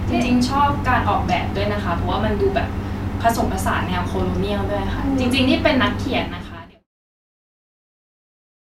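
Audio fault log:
There is no fault in this speech audio; the level simply fades out smoothly from around 6 s to 6.88 s.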